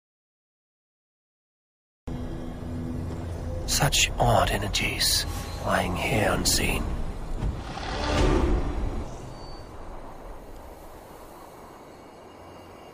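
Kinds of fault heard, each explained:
Audio dropout to silence, 0 to 2.08 s: the clip opens in silence, with no room tone or noise floor at all, and the sound arrives abruptly at 2.08 s as if cut in mid-flow. The input was most likely lost through a disconnected device, a broken link or an accidental mute while the recorder kept writing silence, so whatever sounded during those first two seconds is gone.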